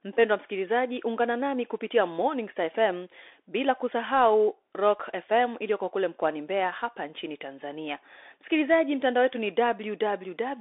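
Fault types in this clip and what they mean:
Bluetooth CVSD headset codec: The speech runs through a one-bit delta modulator, which encodes each sample only as a step up or down with an adapting step size, consistent with a 64 kbps CVSD link. The band sits at roughly 300 Hz to 3.6 kHz, with nothing above 3.8 kHz, giving a thin telephone quality. Codec damage is plainly audible: fast, loud high content outruns the step size and roughens, and granular hiss sits beneath the speech.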